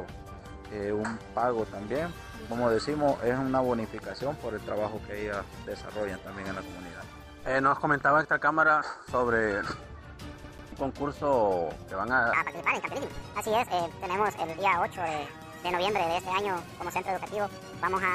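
At 10.44 s the audio catches like a CD stuck on one turn: a 143 ms slice plays twice in a rapid, even stutter with a brief mute at each jump, from 10.44 to 10.72 s. Unlike a dropout, nothing is lost; the same fragment simply repeats until the laser moves on.

From 12.33 s to the end, the section runs at the wrong speed, 1.62 times faster, with the pitch raised by about seven semitones. Speed and pitch shift together, which separates this from a pitch-shift effect, and the likely cause is playback against a mismatched clock.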